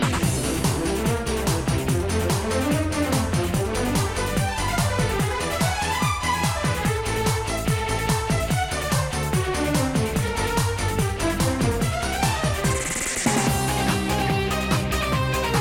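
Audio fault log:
14.80–14.83 s, loud pop: a single sharp pop lands near the end of the clip, peaking about 5 dB above the surrounding signal and lasting under 30 ms, while the sound underneath carries on without a break. The likely cause is a brief voltage step or pulse entering the chain from a plug, switch, static discharge or driver glitch, which the downstream circuitry shapes into a short, percussive transient.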